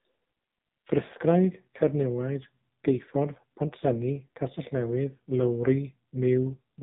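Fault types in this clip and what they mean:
AMR narrowband mobile codec: speech band-limited to 3.8 kHz, with heavy buzzy, synthetic coding artefacts throughout, which fits a low mode near 5.9 kbps.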